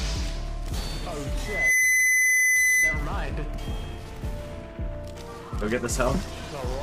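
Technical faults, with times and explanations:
1.45 to 3.07 s, loudspeaker feedback squeal: a steady tone at 2 kHz rises out of the audio over roughly a third of a second and then sits at about 10 dB above the programme level until it stops at 3.07 s. A microphone is picking up the loudspeaker it drives, and at 2 kHz the loop gain has gone above one, so that frequency keeps reinforcing itself on every pass until it turns into a sustained squeal.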